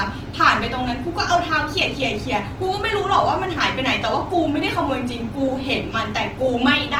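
Speech that sounds grainy, rough and noisy throughout. The likely cause is Opus compression in its music mode, which fits about 16 kbps. Bandwidth stays full, reaching 20.2 kHz.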